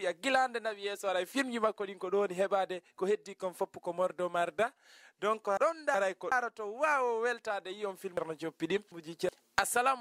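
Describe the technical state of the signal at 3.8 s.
At 3.8 s the signal is intact, with no dropout, distortion, glitch or other technical fault to be heard at that point.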